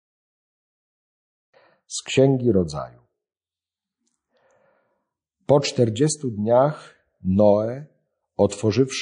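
Throughout the recording, the speech has plainly audible damage of the kind that likely comes from MP3 compression at a low bitrate, with the sound pointing to something near 40 kbps. Starved of bits, the encoder drops the weaker frequency lines, which then flicker in and out between frames. The result is a watery, swirling texture, with metallic chirping on s sounds and blurred onsets.

From 8.49 to 8.51 s there is pre-echo. The encoder kept to long transform blocks and never switched to short ones. The sound suggests a window of roughly 52 ms. Quantisation noise meant for a sharp attack late in that block was spread across the quiet stretch before it, rising by about 17 dB. A brief hiss of about 22 ms can be heard ahead of the onset, and the attack itself sounds softened and smeared.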